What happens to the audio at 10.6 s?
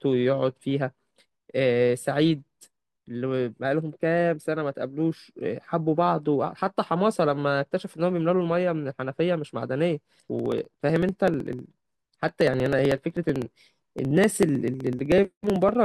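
At 10.6 s the audio is inside a run of periodic USB or driver dropouts. The run lasts from 10.39 s to 15.75 s. Every 63 ms, something blocks the audio path, and about a millisecond of sound is skipped outright. Around a hundred such gaps occur, roughly sixteen per second. Each skip joins the audio abruptly. The result is a steady train of small ticks riding on the speech, audible wherever signal is present.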